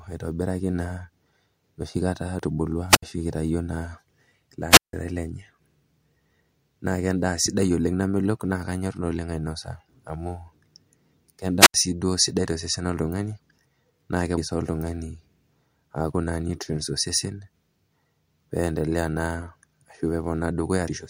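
At 2.39 s, just before "etubulua ashu itayuo naa", the speech jumps forward, the first of three compressed frames skipped events. Whole coded frames never reached the output, so roughly 300 ms of audio is lost. The size of the jump fits about three frames of roughly 93 ms.

From 2.88 to 3.03 s, just before "ashu itayuo naa", a wireless microphone squelch dropout occurs. The radio link weakens, hiss swells briefly, and the receiver's squelch mutes the output for 61 ms before the signal returns. Two more dropouts follow, at 4.70 to 4.93 s with a 163 ms hole and at 11.60 to 11.74 s with an 80 ms hole.

Frames are skipped again at 14.38 s, before "sii oltung'ani", losing about 300 ms. At 20.88 s roughly 400 ms disappears, which fits about four frames.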